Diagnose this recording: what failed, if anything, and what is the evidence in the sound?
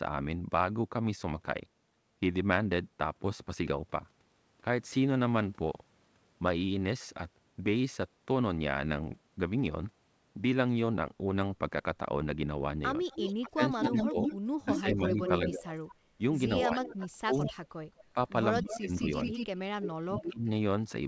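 The call's echo canceller, at the call-processing stage, likely hit double talk and clamped down on the near-end speech. From 13.04 to 17.53 s it dips by up to about 20 dB, roughly two seconds in total, and from 18.14 to 20.47 s it drops more sharply, about 35 dB, for around a second in pieces. This is speech suppressed in double talk.

The far-end loudspeaker's echo canceller also likely failed to cancel its microphone pickup, so an echo leak returns a delayed copy of the speech, 205 to 214 ms late. From 13.09 to 15.95 s it is about as loud as the speech itself. It returns at 16.72 to 16.85 s and 17.43 to 18.04 s, about 15 dB down, then at 18.6 to 19.47 s and 20.2 to 20.31 s, about 5 dB down.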